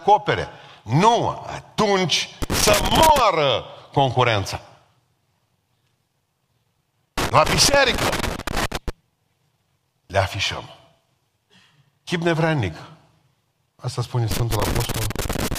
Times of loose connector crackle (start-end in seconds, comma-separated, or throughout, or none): 2.42-3.19, 7.18-8.90, 14.31-15.58